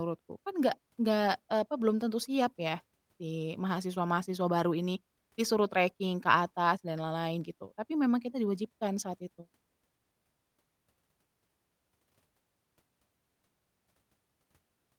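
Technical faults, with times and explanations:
Nothing in this speech recording stood out as a technical problem on listening.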